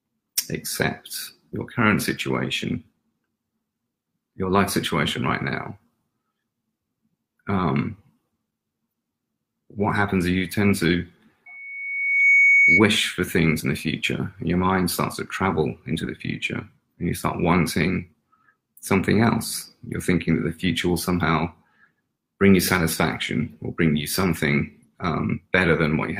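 From 11.46 to 12.88 s, loudspeaker feedback squeal: a 2.2 kHz tone swells over under a second to about 10 dB above the audio as the mic–speaker loop self-oscillates.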